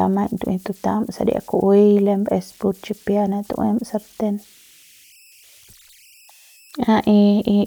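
Converter idle tones run through the whole speech clip. The delta-sigma converter was working without dither. With small input it settled into repeating bit patterns, and those patterns produced a tone. Here the tone sits around 3 kHz, about 33 dB below the signal. It comes through as a faint, thin whistle in the pauses. Under quieter passages it turns into a grainy hiss. Its pitch follows the input's offset rather than the speech itself.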